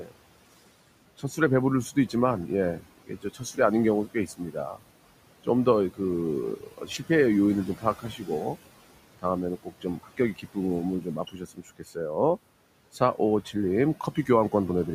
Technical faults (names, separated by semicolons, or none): noise suppressor artifacts; speech cut by the noise suppressor